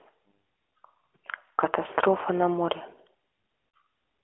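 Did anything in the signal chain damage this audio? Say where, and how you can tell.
Yes. The damage is on the network side, where lost AMR speech frames were concealed by the decoder. There is a brief dip and warble at 0.31 s, lasting about 20 ms, and a longer smeared, drawn-out moment at 3.75 s, about 40 ms long. The decoder filled each missing frame by repeating the last good pitch and vocal tract settings at falling gain. That concealment is why there is no hard click or dead gap, as a buffer dropout would leave. The narrowband band-limiting underneath is the normal codec.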